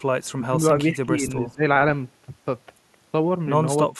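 Right at 0.24 to 0.32 s there's a very faint echo leak, a ghostly copy of the speech trailing about 390 ms behind, likely from a loudspeaker echo the canceller didn't fully catch. Then comes speech suppressed in double talk: the voice dips by around 15 dB from 0.36 to 0.64 s and again from 0.89 to 1.63 s, then drops much harder, around 30 dB, from 3.96 s to the end. That's likely the canceller ducking the loudspeaker side's voice while both sides talk.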